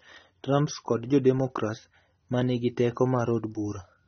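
Speech clip with AAC compression damage throughout. Nothing sounds above 6.3 kHz, leaving it dull. The smearing and warble likely come from AAC-LC at roughly 27 kbps.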